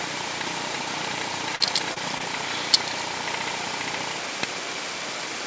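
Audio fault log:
1.56–1.62 s, 1.94–1.98 s and 2.18–2.22 s: short concealed packet loss. About 40, 20 and 20 ms of audio missed the decoder's deadline. Each gap was patched by extending the preceding sound and blending back, giving brief smears or wobbles.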